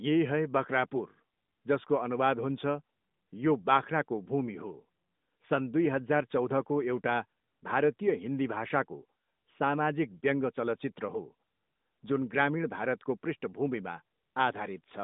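Nothing is technically wrong with this speech recording.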